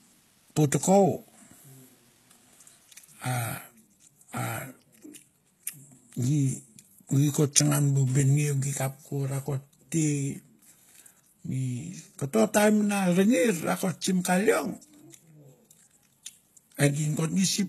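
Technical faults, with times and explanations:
Throughout: HE-AAC compression likely; treble is rebuilt from copied lower bands, so sibilants sound gritty and metallic rather than dull, with nothing above 12.3 kHz, fitting about 16 kbps.
0.00 to 3.38 s: low bit depth with dither; a steady, even hiss at roughly 35 dB below the speech, with no crunchy distortion, which fits a 10-bit signal rounded with dither.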